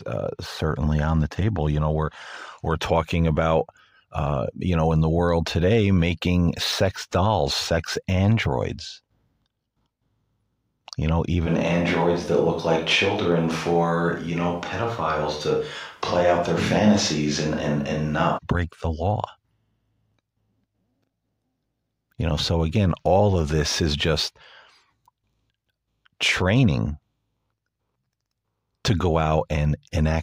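From 11.48 s to 18.37 s, the speech suddenly turns roomy and hollow, with thinner bass. The level stays roughly the same. A faint room noise sits well below the speech, around 35 dB down. At 18.37 s the close, full sound returns just as abruptly. This is a switch to a distant microphone. The close microphone's feed likely dropped out, leaving a pickup further away that hears more of the room.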